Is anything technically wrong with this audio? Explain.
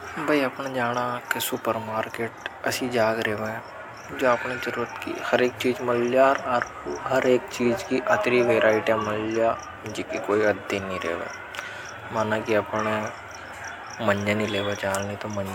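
No, nothing stood out as technically wrong on listening to this speech recording.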